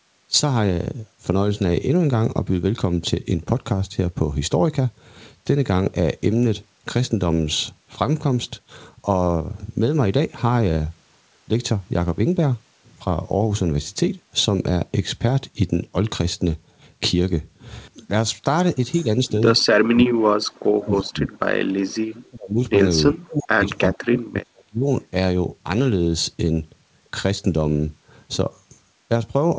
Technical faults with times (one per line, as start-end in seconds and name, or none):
18.98-19.03 echo leak
19.80-21.33 speech suppressed in double talk
22.07-22.59 speech suppressed in double talk
23.10-24.88 speech suppressed in double talk